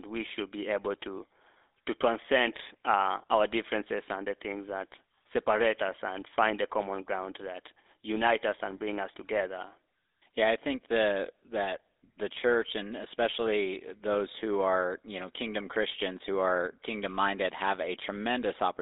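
A speech clip carried end to end through the GSM full-rate codec, with plainly audible buzzy, gravelly roughness throughout, which fits the 13 kbps mode. The band sits roughly between 300 Hz and 3.7 kHz, nothing above 3.8 kHz, and the roughness comes from a regular-pulse excitation model replacing the natural voice source.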